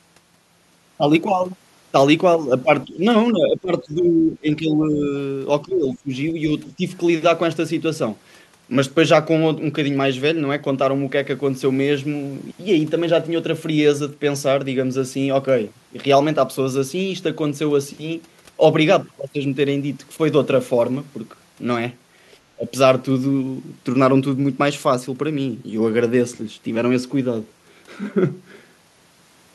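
The speech keeps ducking at 2.86–2.98, 3.39–5.07, 5.62–6.11, 6.68–6.82 and 22.56–22.71 s, from a slight dip to roughly 20 dB down. That's likely speech suppressed in double talk: the echo canceller mistook the talker for loudspeaker echo while both sides spoke, and turned it down.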